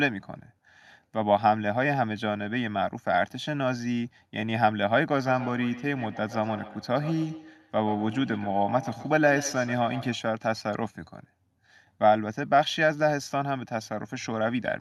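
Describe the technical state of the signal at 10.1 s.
At 10.1 s, feedback echo between two devices (5.26 to 10.28 s): another device's playback is re-captured, returning speech roughly every 150 ms, thin and ringing, about 13 dB down.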